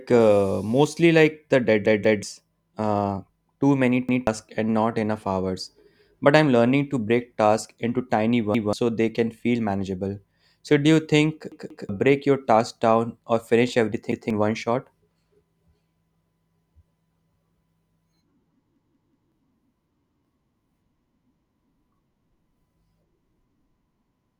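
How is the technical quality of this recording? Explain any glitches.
The recording is marred by seven stutters, all from one fault, a repeated buffer. Whenever fresh audio failed to arrive in time, the device replayed its last block of about 186 ms (which fits an 8192-sample buffer). Each replay is heard as that chunk of speech sounding again with a hard join, and the audio it displaced is gone.

At 1.86–2.23 s, just after "uh mostly like the" and before "uh too many", the block plays twice extra. At 4.09–4.27 s, ahead of "and not enough hours", and at 8.55–8.73 s, ahead of "so they can feel", it repeats once. It repeats twice at 11.52–11.89 s, once at 14.12–14.30 s, three times at 18.76–19.32 s, the longest stutter at roughly half a second, and once more at 20.06–20.25 s.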